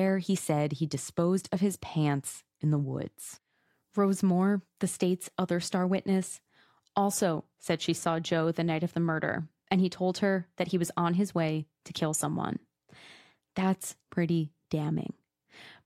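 No technical faults are audible.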